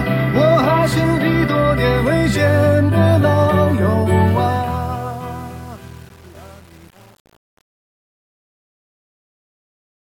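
From 4.26 s to the end, the fade-out shows truncation distortion. Its level stage seems to keep about 7 bits without dither, so the tail turns gritty.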